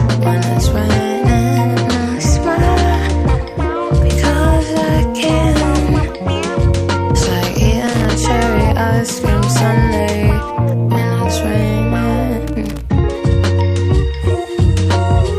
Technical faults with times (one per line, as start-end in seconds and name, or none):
7.87-8.05 loose connector crackle
12.47-12.81 loose connector crackle